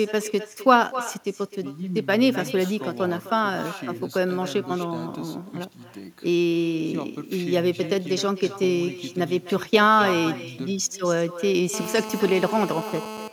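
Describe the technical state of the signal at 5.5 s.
At 5.5 s, as throughout the whole clip, the speech carries echo with no canceller: the far end's loudspeaker feeds its microphone, returning a thinner copy about 14 dB down, roughly a third of a second late. Unlike reverberation, it is a distinct delayed repeat, not a smooth decaying tail.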